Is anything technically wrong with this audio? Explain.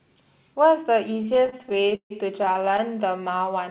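Yes. From 1.14 to 2.8 s the speech shows repeated stalls (stutter). Packets arrived late, so the jitter buffer kept running dry. The receiver stretched the last sound through each gap, about half a second in total, the longest 0.15 s. The speech drags and hiccups. Nothing is lost. The band stops at 4 kHz, which fits a narrowband call codec.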